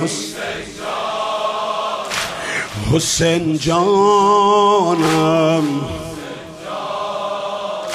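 No technical faults can be heard anywhere in the audio: the signal stays continuous and steady, with no breaks, level disturbances or added noise at any point.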